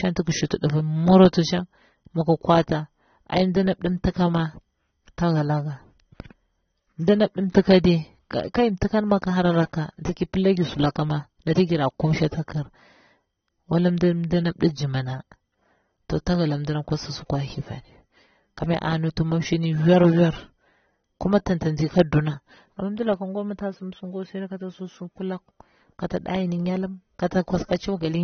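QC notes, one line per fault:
throughout, AAC compression: speech sounds dull with plainly audible codec damage and nothing above 6.3 kHz, likely from AAC-LC at a low bitrate, consistent with 24 kbps. The encoder discards high frequencies to save bits. On a spectrogram, energy stops abruptly at a flat ceiling near 6.3 kHz.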